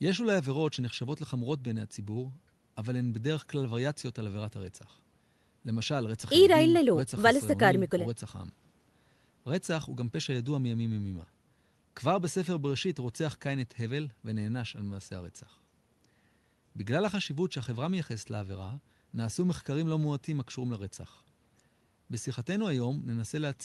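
No technical faults can be heard anywhere in this speech.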